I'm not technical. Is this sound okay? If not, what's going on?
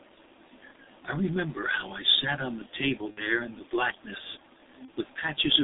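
No, it isn't. The whole recording went through the G.723.1 codec, an old, heavily squeezed internet-phone format. It keeps only a narrow band, roughly 200 Hz to 3.7 kHz, so the speech sounds muffled and a bit hoarse, with smeared consonants.

There are also two spots of VoIP packet loss concealed by the speech codec. Around 3.11 to 3.24 s, and again around 4.85 to 4.90 s, bits of audio went missing. The decoder filled the gaps by stretching what came before, so you hear a brief buzzy or smeared patch that fades.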